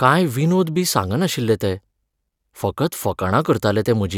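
Nothing in this speech recording stood out as a technical problem on listening.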